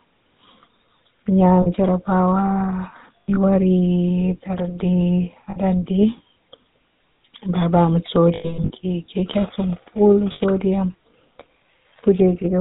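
The whole speech clip passes through the GSM full-rate codec, at a rate that fits 13 kbps. It models the throat and mouth and drives that model with sparse, regular pulses. Nothing above 4 kHz survives. The result is a plainly audible buzzy, gravelly roughness.

Lost GSM frames break in five times. In each gap, the decoder repeats the last good settings, so the sound holds as a rough metallic ring. The first is at 1.62 to 1.67 s, about 40 ms. The second runs from 3.23 to 3.37 s, with gaps scattered over 160 ms and a longest stretch of roughly 70 ms. Then comes 5.50 to 5.57 s, about 60 ms. The worst is 8.34 to 8.71 s, with losses spread over 360 ms and a longest run near 100 ms. The last is 10.32 to 10.41 s, about 80 ms.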